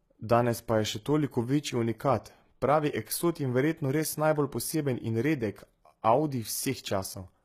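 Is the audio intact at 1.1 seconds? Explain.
No, not really. At 1.1 seconds, and right through the clip, the speech carries damage that likely comes from HE-AAC compression at a very low bitrate, something like 20 kbps. The codec keeps only the lower band properly and fakes the treble by copying lower bands upward under a rough envelope. The top end is synthetic: s sounds come out gritty and lispy, and nothing reaches above about 14.9 kHz.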